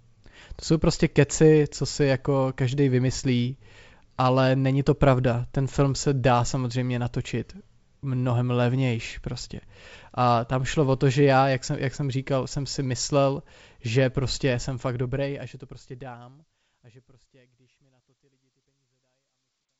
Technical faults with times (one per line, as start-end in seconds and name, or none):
none